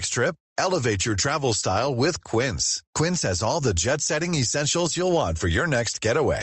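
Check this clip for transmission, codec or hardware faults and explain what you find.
One fault runs through the whole speech clip: gain pumping. The gain ducks by around 10 dB under each loud syllable, leaving the level squashed and breathing. The likely cause is input gain set far too high, with a fast limiter clamping down on each peak.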